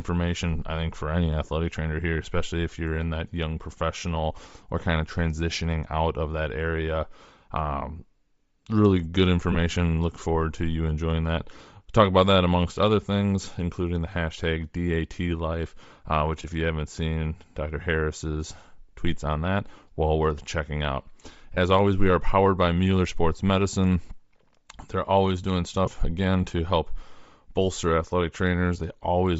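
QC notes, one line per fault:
throughout: Bluetooth LC3 compression, likely; upper spectrum sounds thinned and noise-filled, giving a breathy, grainy edge consistent with roughly 32 kbps, 7.5 ms frames.
9.52–9.56 s, 16.42 s, 21.54–21.57 s, 25.86 s: lost LE Audio frames; brief noisy smears of about 22.5, 15, 22.5 and 15 ms, fitting two or three missing 7.5 ms frames.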